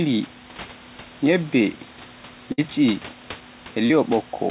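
From 2.52 to 2.60 s, a burst of packet loss drops 60 ms of audio. The receiver fills 57 ms by extending and fading the last sound, then jumps ahead.

At 3.86 s, a short concealed packet loss covers 40 ms of missing audio with 38 ms of synthesised continuation, heard as a brief smear before the signal blends back. The band stops at 4 kHz, which points to a narrowband G.711 mu-law call codec.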